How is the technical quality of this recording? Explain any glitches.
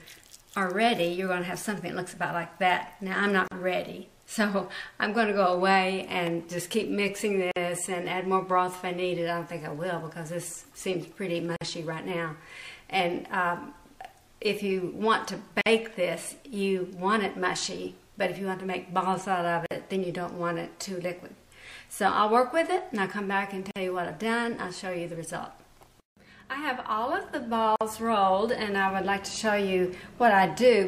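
The recording has a repeating glitch: a gap at a join of encoded pieces. Brief dropouts open in otherwise continuous sound at 3.48, 7.51, 11.56, 15.61, 19.66, 23.71 and 27.76 s, about every 4 s. The first lasts 37 ms, the rest 49 ms. Each piece was encoded separately and joined untrimmed, so encoder start delay and end padding remain as silence. Edges are softened by the codec, and the sound resumes where it stopped.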